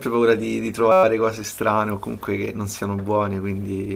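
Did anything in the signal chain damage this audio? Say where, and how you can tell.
Yes. A system hang loop at the driver or buffer stage from 0.92 to 1.04 s: one 5.33 ms slice repeats 22 times, a steady 188 Hz buzz. That fits a 256-sample ring buffer replayed while the driver stalled, with almost nothing skipped.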